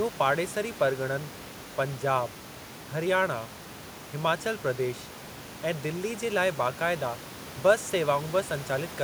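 Nothing here points to a technical fault, just the speech with the room's own background noise sitting about 14 dB beneath it, which is part of the recording itself.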